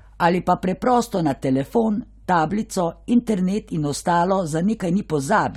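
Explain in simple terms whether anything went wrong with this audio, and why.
Nothing went wrong; the speech sounds as recorded.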